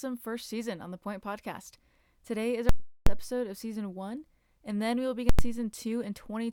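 At 2.69 s the speech hits invalid numbers at full scale. A calculation blew up to infinite or invalid values, and the output got pinned at one extreme value for a whole block, about 0.37 s, which fits a 16384-sample block. You hear a loud pop, nothing, then another pop at 3.07 s, just before "episode of season one." It happens again at 5.29 s, right after "and then we will." That block is only about 93 ms, consistent with 4096 samples, so it lands nearly as a single bang.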